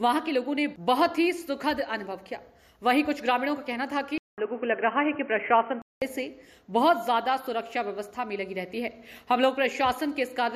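Input switched to a poorer device, from 4.18 s to 6.02 s: the sound drops out for about 200 ms, then returns dull and boxy, with nothing above 3.2 kHz and a new background noise sitting roughly 30 dB below the signal. Loudness stays about the same. The likely cause is the recording path changing to a narrower-band input, such as another microphone or a headset's call profile, before full bandwidth returns at 6.02 s.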